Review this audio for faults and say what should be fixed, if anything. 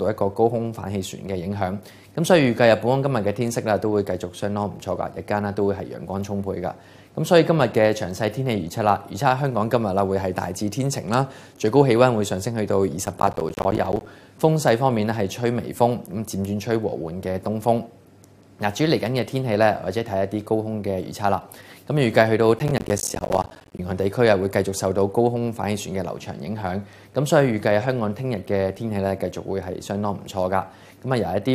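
Processor overload crackle appears twice, from 13.05 to 14.06 s and from 22.59 to 23.79 s. In both bursts the processor falls behind and misses buffer deadlines repeatedly. Each missed buffer drops out to silence, leaving short gaps with hard edges, roughly 10 ms apiece. Dozens of these in quick succession produce a gritty crackle that stops once the load eases. The second burst is longer and denser. To prevent it, reduce processing load or use larger buffers.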